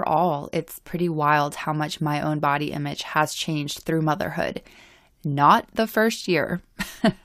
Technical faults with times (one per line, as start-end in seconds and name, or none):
4.63 overlap between stream segments